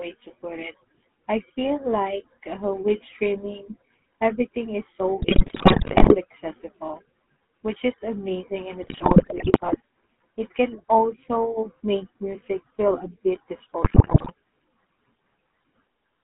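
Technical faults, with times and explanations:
Throughout, GSM full-rate codec: the speech has passed through the original GSM full-rate coder, which fits a 13 kbps stream. It models the vocal tract as a filter and excites it with a sparse, regularly spaced pulse train that keeps only a fraction of the excitation detail, so voiced sounds come out buzzy and gravelly. The line is limited to roughly 200 Hz to 3.5 kHz, taking away low warmth and the upper sibilance and air.
5.22–6.16 s, 8.82–9.76 s and 13.84–14.32 s, GSM bit errors: corrupted bits reached the speech decoder over a bad link, at an error rate that fits about 5 to 6 percent in the first and third bursts and nearer 5 percent in the second. Wrong filter, pitch and gain parameters distort each frame's spectrum and level, so the speech breaks into squawks, pops and gargling. The first burst falls between "streaming everything is so" and "accessible which is amazing", the second comes right after "which is amazing in", and the third comes right after "music feel a bit".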